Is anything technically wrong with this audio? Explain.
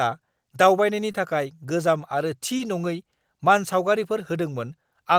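Yes, there are two instances of short concealed packet loss in this speech, at 1.11 to 1.15 s, just before "थाखाय गोजाम", and at 2.57 to 2.61 s. In each, about 20 ms of audio arrived too late to decode, and the receiver patched the hole by extending the preceding sound before blending back in. Each one comes across as a brief smear or wobble rather than the hard silence or click of an unconcealed dropout.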